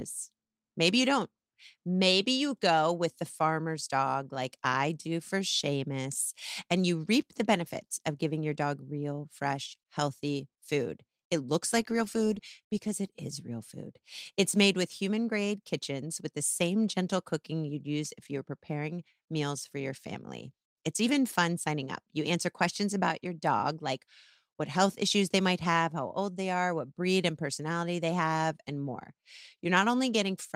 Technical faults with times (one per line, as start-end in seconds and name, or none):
none